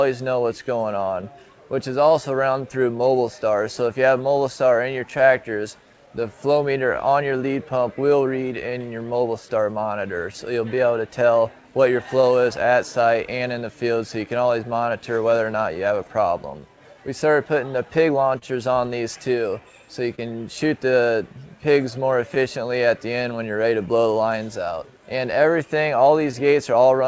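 Right from the start there's clock drift between sender and receiver: the sending clock runs around 2% slow, so the receiver's jitter buffer keeps running short all the way through. That produces repeated timing corrections from 0.62 to 26.74 s, with pieces stretched so playback sits at 99% speed and gains about a third of a second overall. If noticeable at all, this comes across as slight hiccups or a slightly unsteady tempo. Scattered short gaps show up in three patches. About ten fall between 1.21 and 8.72 s, about five between 12.21 and 15.77 s, and about seven between 18.38 and 23.25 s. Each was patched by extending the last sound, leaving tiny ticks or smears that run to around 30 ms at most in the last patch. Near the end, at 26.31 to 26.34 s, there's a short stall from a late packet: the buffer ran dry, and 16 ms of the previous sound was held before playback carried on, giving a brief held buzz or dip. 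All of this comes through a G.722 call path at 64 kbps, which is why nothing is heard above 8 kHz.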